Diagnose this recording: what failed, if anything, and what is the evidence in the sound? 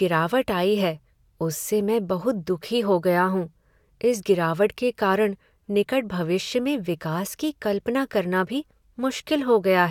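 Nothing failed in this recording, and the sound holds no evidence of any fault.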